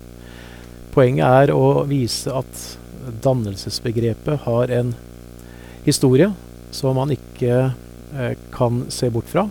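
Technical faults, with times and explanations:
Throughout, video or display buzz: a steady 60 Hz buzz sits under the speech for the whole clip, fairly strong at roughly 20 dB below it, with a fizzy hash riding above. A screen or video cable is leaking its picture field rate into the audio path. Plain mains hum at the same frequency would sound smoother and more tonal. The raspy, hashy edge marks this as display interference.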